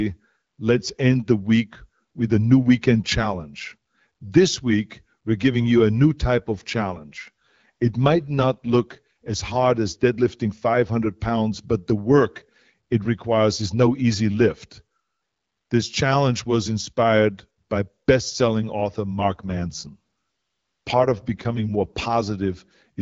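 After "giving you a new", from 6.21 to 9.78 s, the speech turns rougher and more synthetic, then recovers just before "as deadlifting". The same happens after "by best selling author", from 19.18 to 22.18 s. Both are an AMR rate drop: the wideband coder steps down to a lower bitrate with no change in bandwidth and no gap. The added harshness fits a move from 12.65 to 8.85 kbit/s, where the clear HD Voice baseline returns once the rate recovers.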